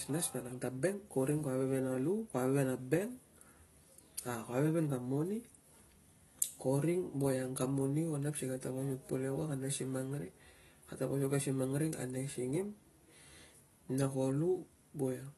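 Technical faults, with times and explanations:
Throughout, AAC compression: the speech sounds dull and smeared, with plainly audible codec damage and nothing above 12 kHz. The cut-off and the warbly, fizzy texture on sibilants likely come from AAC-LC at about 32 kbps. Too few bits remain to code the upper spectrum faithfully.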